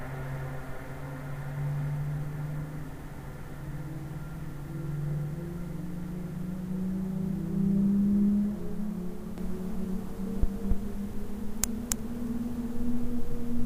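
From 9.38 s to the end, the audio is likely being captured a second time by a slower path, or an edit is holding two copies out of step, which produces a doubled audio track. A full-band copy of the sound enters abruptly and runs roughly 300 ms behind the original, at about the same loudness. Every event is followed by a dry, identical repeat with no decay or room colour, and the doubling continues to the end.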